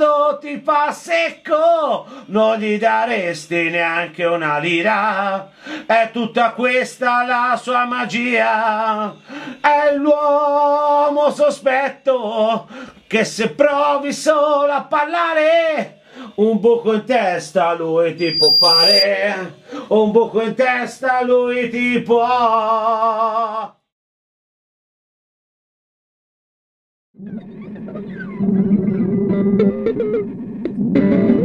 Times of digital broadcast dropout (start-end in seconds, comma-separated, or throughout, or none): none